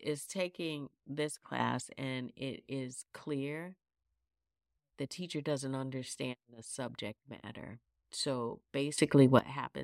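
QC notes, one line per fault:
1.6–1.82 s, sudden gain jump: a gain change likely applied without a ramp lifts speech and background noise together by about 6 dB, abruptly.
8.98–9.39 s, sudden gain jump: level steps up by about 15 dB in one sample, so speech and noise floor leap together, sharply.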